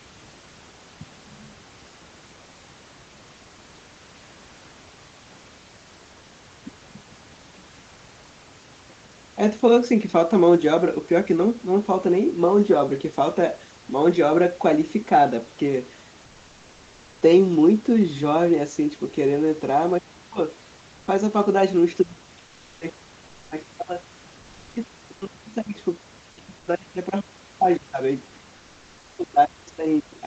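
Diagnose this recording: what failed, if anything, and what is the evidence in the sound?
Speech suppressed in double talk, at the call-processing stage. At 19.99 to 20.39 s the speech is suppressed for about 300 ms in total. From 22.03 s to the end it is pushed down, with the deepest dips around 40 dB. On a waveform the envelope collapses into near-flat gaps. A spectrogram shows speech energy, capped at 8 kHz by the call bandwidth, vanishing in vertical strips. The likely cause is an echo canceller treating overlapping far-end talk as echo and attenuating both.

Comfort noise in place of the background, at the codec stage. For about 80 ms at 26.59 s the room's background, which sits around 34 dB below the loud speech, becomes a steady, featureless hiss roughly 2 dB quieter. On a spectrogram the textured noise floor turns into a smooth, uniform band. On a waveform it shows as a brief, slightly lower, even-amplitude stretch. 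This likely comes from discontinuous transmission, consistent with Opus DTX, where the receiver synthesises noise during a detected pause.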